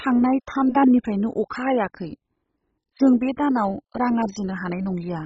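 From start to finish the speech is dull, with nothing above 7.5 kHz, and carries heavy gurgling, granular distortion as upper sub-bands drop in and out and the rest are coarsely quantised. This is likely MP2 compression, at a starved bitrate consistent with about 16 kbps.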